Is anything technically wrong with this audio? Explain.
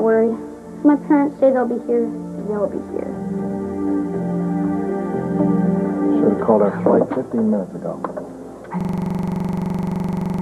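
Yes. At 8.81 s the playback system locks up in a system hang loop that lasts to the end of the clip. The computer or its audio driver stops supplying new data, but the sound hardware keeps replaying the last ring buffer. A 42.7 ms slice, which fits a 2048-sample buffer, repeats exactly dozens of times at about 23.4 per second. The audio freezes into a rapid, rattling stutter with a rough buzzing edge.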